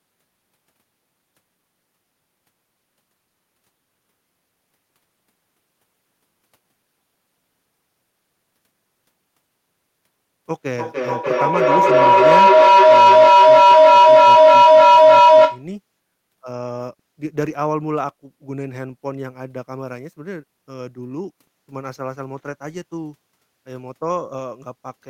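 Feedback howl runs from 10.5 to 15.7 s. A microphone and loudspeaker in one room form a loop that gains level each trip, so repeats swell into a tone near 1 kHz, pulsing roughly every third of a second and peaking about 15 dB above the speech.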